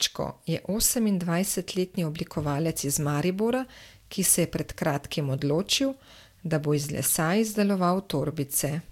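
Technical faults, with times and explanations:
Nothing technical stands out here; the recording comes through without any faults worth pointing to.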